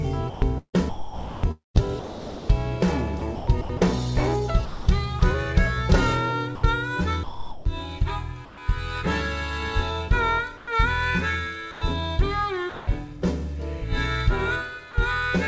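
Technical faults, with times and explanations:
0.30–3.81 s, 4.65–5.21 s, 6.55–8.57 s: sound chopped by the voice detector. The sender likely toggled transmission repeatedly, replacing about 1.8 s, 0.24 s and 0.62 s of sound with comfort noise, so the audio stutters.
10.57–10.67 s: comfort noise in place of the background. For 100 ms the real background, about 20 dB below the loud parts, is likely swapped for featureless synthetic noise about 2 dB quieter.
11.71–11.81 s and 12.69–12.87 s: sound dropped by the voice detector. Quiet sound was likely judged background and not sent, losing about 100 ms and 130 ms to steady filler noise before resuming.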